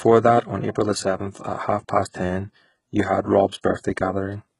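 Throughout, the treble above 11.1 kHz is gone and what remains is rebuilt from lower bands, likely HE-AAC compression at a very low bitrate, so sibilants sound gritty and metallic. From 3.61 to 3.64 s, pre-echo: coding noise spreads about 25 ms ahead of a sharp attack, which arrives after a brief hiss and sounds softened.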